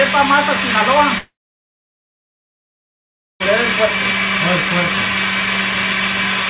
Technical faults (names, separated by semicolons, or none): long network dropout